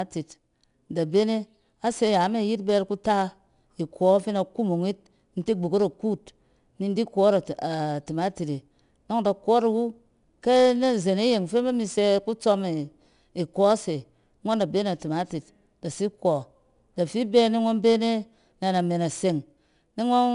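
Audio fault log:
Throughout: 4-bit ADPCM compression. Each sample is a coarse 4-bit step from a prediction, so a gritty hiss rides on louder speech and follows its level. Sharp onsets roughen because the step adapts too slowly. Nothing sounds above 10.6 kHz, which fits about 89 kbps.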